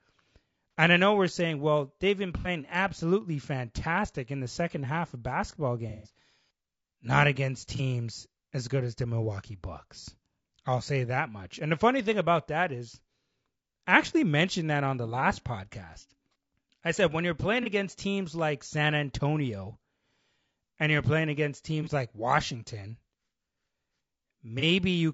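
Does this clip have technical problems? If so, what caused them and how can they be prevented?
Yes. Throughout the speech there is low-delay AAC compression, likely AAC-ELD at around 32 kbps. Its short frames blur the pitch harmonics, leaving a rough, grainy sound with noise between them. On a spectrogram, the harmonic lines look smeared, with speckled energy in the gaps and a thin or patchy top band. A higher bitrate, or a codec mode with longer frames where delay allows, would prevent this.

AAC frame loss with concealment occurs at 0.71–0.74, 2.39–2.48, 5.90–6.13, 7.76–7.81, 10.01–10.05, 17.63–17.68, 21.83–21.89 and 24.59–24.64 s. Most gaps last about 30 ms, which fits single lost frames. The one at 2.39 s lasts about 60 ms, and the one at 5.90 s lasts about 150 ms. The decoder fills each gap from the last good spectrum, so these spots sound smeared or phasey. On a spectrogram they appear as blocks of frozen or noisy spectrum that break the speech's moving formants. 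More reliable transport with forward error correction or a jitter buffer would prevent the losses.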